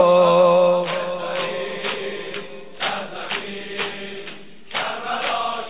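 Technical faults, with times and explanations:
No technical faults can be heard anywhere in this audio.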